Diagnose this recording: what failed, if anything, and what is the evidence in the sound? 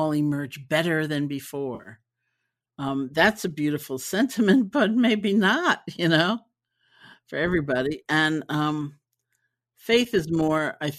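The failure is in the network stage: AAC frame loss with concealment, from about 1.75 s to 1.89 s, right after "emerge better than". Roughly 80 ms of audio goes missing, spread over about 100 ms, with the longest gap around 50 ms, which fits several short low-delay frames dropping in bursts. The decoder patches each hole from the last good spectrum, so you hear a brief smeared, noisy, phasey stretch instead of silence. The stream itself is likely AAC-ELD at 64 kbps.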